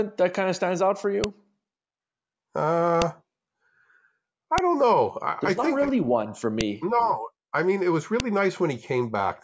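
Loud snaps at 1.24, 3.02, 4.58, 6.61 and 8.20 s are file header played as audio: header bytes left at each join click regardless of the speech.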